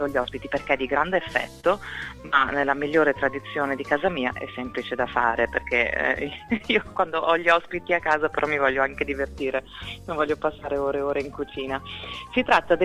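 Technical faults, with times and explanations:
Throughout: clock drift between sender and receiver. The timing is slightly unsteady, with small hiccups recurring at uneven intervals. The sender's clock runs about 3% slow relative to the receiver's, so the jitter buffer keeps draining and needs constant topping up.
0.10 to 12.69 s: repeated timing corrections. The pace feels faintly dragged and uneven, playing at 98% speed. To cover the slow sender, the receiver keeps repeating short pieces, all in the same direction, adding roughly 300 ms in total.
1.60 to 1.65 s: short stall from a late packet. A sound is held for 30 ms too long, with a slight buzz or dip. The packet arrived late, the buffer ran empty, and the receiver stretched the last sound, then resumed without loss.
4.72 to 11.63 s: scattered short gaps. About seven brief ticks or smears are spread over this stretch, the longest around 30 ms. 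Packets arrived late, and the receiver patched each hole by continuing the previous sound, roughly 70 ms altogether, with nothing missing.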